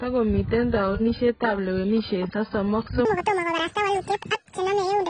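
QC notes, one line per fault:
throughout: AAC compression. Dull and smeared with a warbling, fizzy texture; likely a low-bitrate AAC-LC encode, around 12 kbps.
3.05–5.10 s: section at the wrong speed. Runs 1.88 times fast to the end, pitch raised about ten semitones, sounding high and hurried; likely played against the wrong clock.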